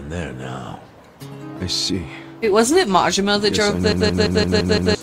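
A system hang loop runs from 3.93 to 4.95 s. The same 171 ms fragment repeats exactly about six times, at roughly 5.9 Hz, as a machine-gun stutter. Playback kept cycling one ring buffer, which fits an 8192-sample size, while the system froze, losing about a second of audio.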